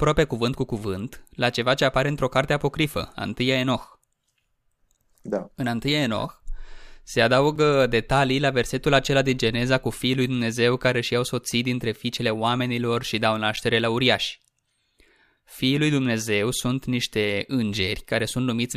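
At 7.56 s, just before "detalii la versetul acela", the speech drops out for about 5.5 ms, then again at 13.56 s, between "fiicele oamenilor și dau" and "la uriași", for about 8.2 ms. Both are a gap between stream segments: timestamps on neighbouring 6-second chunks don't quite meet, so the player pads the hole with silence. You hear a tiny hard-edged tick of nothing, and no speech is actually missing.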